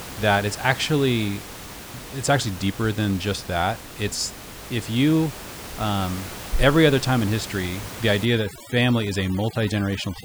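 From 8.25 s to the end, right after "time in history the", overdone noise removal sets in: the suppressor cuts bands sitting near its noise estimate, taking the room noise, about 15 dB under the speech, and the quieter speech detail with it, leaving twinkling specks.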